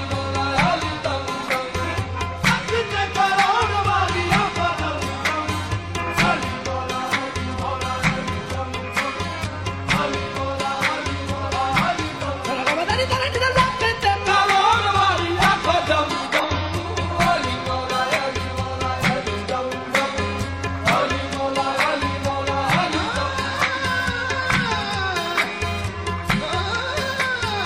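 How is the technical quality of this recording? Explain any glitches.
Two short glitches, both from damaged data in a compressed stream: at 16.40–16.45 s and 24.62–24.67 s, corrupted frames throw the decoder off sync, giving a quick chirp, squawk, click or short hole.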